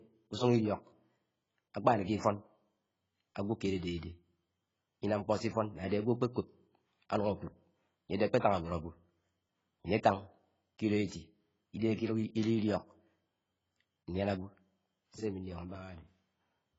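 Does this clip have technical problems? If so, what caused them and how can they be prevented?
Yes. The speech sounds dull and smeared from start to finish. Nothing is heard above 7.6 kHz, so sibilants lose their edge and take on a fizzy, warbling texture. This is likely heavy AAC compression. The encoder keeps only what its hearing model deems essential, and the damage fits a very low bitrate, around 16 kbps. It lowers the cut-off and leaves gaps in the spectrum. To prevent it, encode at a higher bitrate.

There is also pre-echo at two moments. A short hiss arrives just before a sharp attack, from 5.88 to 5.91 s, spread over 34 ms. It happens again from 11.06 to 11.12 s, spread over 53 ms. The codec spreads its quantisation noise across a whole block. When the attack sits late in that block, the noise meant for the loud part leaks into the quiet moment before it. A higher bitrate, or an encoder with better block switching, would prevent this.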